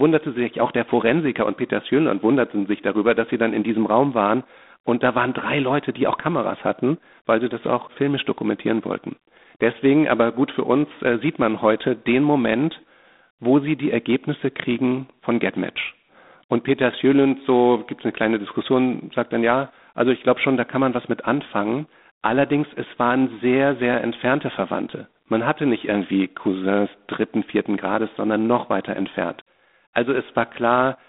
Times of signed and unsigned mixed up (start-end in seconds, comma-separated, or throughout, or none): none